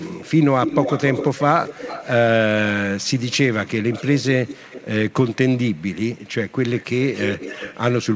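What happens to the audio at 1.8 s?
At 1.8 s the speech carries an echo leak, running from the start of the clip to 2.11 s: a delayed copy of the voice trails the original by about 258 ms, roughly 10 dB quieter. The likely cause is a far end playing the call over a loudspeaker, with its echo canceller letting part of the microphone pickup return. Unlike room reverberation, which smears into a continuous decay, this is one distinct repeat at a fixed lag.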